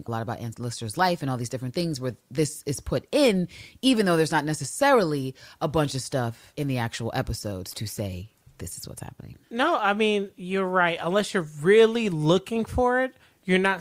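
At 7.71 s, just after "in the actual episodes" and before "to say this is", a corrupt frame decoded. Bits inside one compressed frame were damaged, and the decoder played it anyway. Misread gains and codes put energy at the wrong frequencies. The result lasts about 50 ms, roughly one frame, ending at 7.76 s. It sounds like a short chirpy burst of noise. The error peaks around -25 dBFS.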